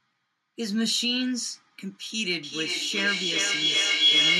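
Speech clip with feedback howl from 2.43 s to the end: a tone around 3 kHz, pulsing roughly every 0.4 s, builds to about 7 dB above the speech as a microphone-loudspeaker loop gains level.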